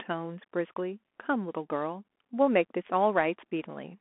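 Throughout, the speech carries Bluetooth CVSD headset codec damage: band-limited to roughly 250 Hz–3.4 kHz, scratchy sibilants, granular hiss and slope-overload distortion, consistent with a 64 kbps one-bit stream.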